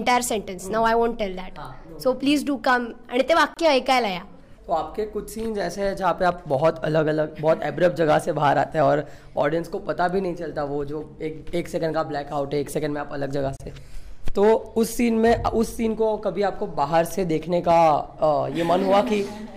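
Silences of 26 and 31 ms cut into the sound at 3.54 and 13.57 s, ten seconds apart: gaps at joins of encoded pieces, where untrimmed encoder padding remains.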